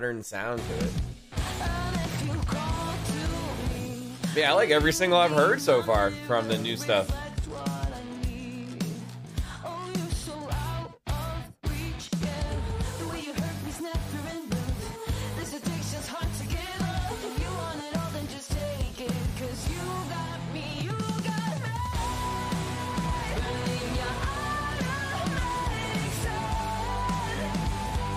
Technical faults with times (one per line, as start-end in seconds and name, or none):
none